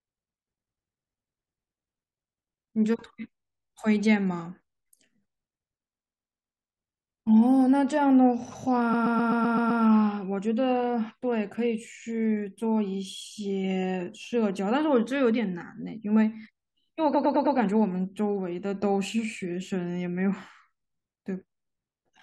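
Repeated frames make the speech stutter at 3.49–3.66 s, 5.94–6.71 s, 8.93–9.82 s and 17.14–17.57 s. A block of compressed frames 85 to 128 ms long replays two to seven extra times. Unlike a dropout, nothing is lost and the audio runs longer.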